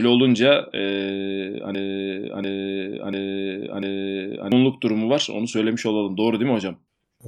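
Speech, with a broken-record loop from 1.75 s to 4.52 s: a 0.69 s fragment repeats exactly four times back to back, and the audio due in that span never plays. The likely cause is a stalled player, encoder or stream resending its last buffered fragment.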